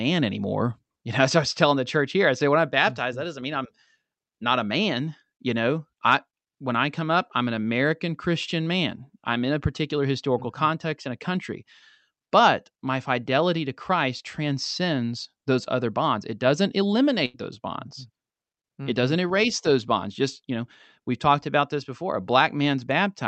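At 17.25 to 17.36 s, just before "those bonds", a burst of packet loss is patched over with a held, fading continuation of the preceding sound rather than silence, and about 80 ms of speech is skipped, unlike a plain dropout. The call codec's band ends around 8 kHz.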